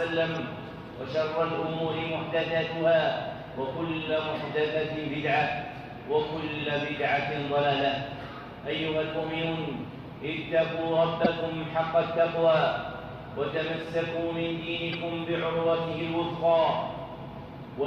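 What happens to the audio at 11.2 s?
At 11.24 s a corrupt frame decoded causes a short burst of damage lasting to 11.27 s, about 26 ms. That span points to a single damaged compressed frame. Bits inside it were flipped, yet the decoder still played it. The misread gains and codes put energy at frequencies where it does not belong. The result is a brief, fairly loud chirp or blip of noise.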